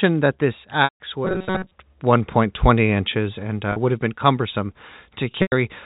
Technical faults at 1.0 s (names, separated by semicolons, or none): packet loss with pitch repetition